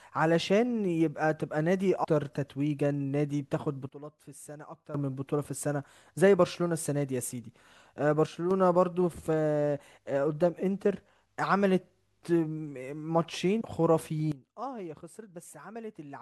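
A speech clip in which, at 2.03 s, the audio lurches forward, losing roughly a fifth of a second. This is compressed frames skipped: around ten whole frames, consistent with 24 ms frames, never reached the output. Three times the level drops abruptly, with the background noise falling along with the speech: by about 15 dB from 3.89 to 4.94 s, by about 6 dB from 8.26 to 8.51 s, and by about 15 dB again from 14.32 s to the end. These are sudden gain jumps, likely from digital gain changes applied instantly with no ramp.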